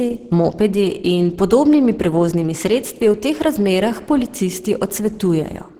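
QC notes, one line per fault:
Throughout, Opus compression: the speech was likely squeezed through a low-rate Opus encoder, and the damage is plainly audible, which fits about 16 kbps with the encoder in its hybrid mode. There the lower band is coded as speech and the upper band as filled band energy, so the sound comes out hoarse and somewhat muffled, with a grainy, noisy texture on top, even though the bandwidth still reaches 20.3 kHz.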